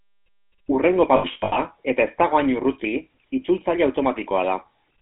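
Speech heard through the GSM full-rate codec, confined to roughly 200 Hz to 3.6 kHz, with a plainly buzzy, gravelly texture from pulse-driven vocal-tract modelling that fits 13 kbps coding. Between 1.16 and 1.59 s, lost GSM frames break the sound up: about 280 ms of gaps scattered across 400 ms, the longest around a tenth of a second, each bridged by a rough metallic ring as the last good frame repeats.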